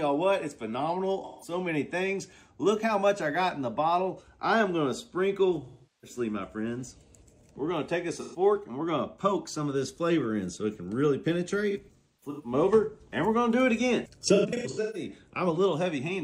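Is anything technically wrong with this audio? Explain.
Yes. AAC frame loss with concealment occurs at 1.24–1.53 s, 5.65–6.17 s, 8.20–8.39 s, 11.70–12.53 s and 14.35–15.10 s. The decoder patches each missing stretch from the last good spectrum, so the sound turns smeared and phasey. The final two are broken, scattered dropouts, the longest run around 300 ms.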